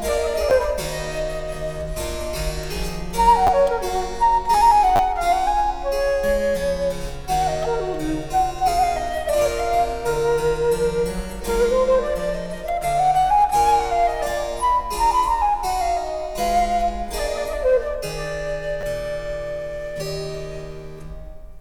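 Repeated buffer faults cause brief clicks or buzzy stutters at 0.5 s, 3.47–3.49 s, 4.96–4.99 s and 18.81–18.83 s. Each sounds like a 10 ms buffer replayed one to three times when fresh audio arrived late. A waveform shows identical short blocks with hard joins, and a spectrogram shows thin vertical lines.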